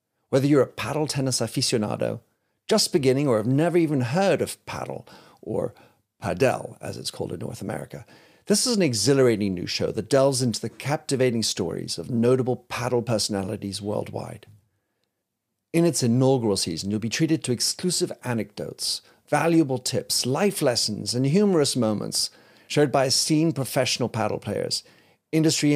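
No technical faults can be heard anywhere in the recording.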